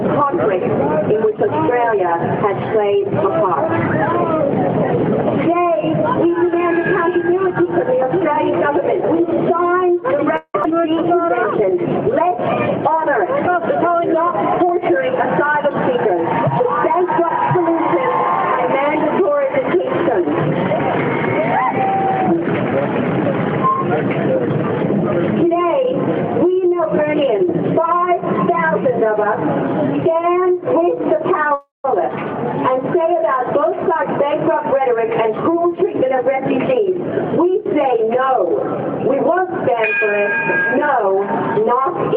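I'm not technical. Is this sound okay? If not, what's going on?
No. There are a few call-related glitches.

Call audio freeze at 10.36 to 10.55 s and 31.54 to 31.85 s: the sound stalls into a fading buzz, then resumes where it stopped, likely from delayed data. Nothing is lost, unlike a skip.

Skip ahead at 10.63 s: about a tenth of a second of sound is simply missing, and playback jumps straight past it with barely any pause.

Jitter buffer slow-down from 10.89 to 12.30 s: the sound plays about 4% slower with the same pitch, slightly stretched, as the call builds up a safety reserve.

Jitter buffer speed-up from 13.47 to 17.56 s (about 4% faster) and 33.62 to 36.96 s (about 8% faster): the sound runs faster at the same pitch, hurried in the second stretch, the opposite of the slow-down.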